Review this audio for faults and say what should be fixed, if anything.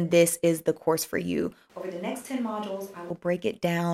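Right after "the course for you", from 1.70 s to 3.10 s, the speech turns abruptly roomy and hollow, loses low end, and drops about 10 dB in level, with room noise rising to roughly 25 dB below the speech. The return at 3.10 s is equally sudden. This is a switch to a distant microphone: the close mic's signal was likely lost or omitted, leaving only a far pickup that captures more reflections and ambience. To prevent it, monitor and record the close mic on its own protected track, with a backup recorder.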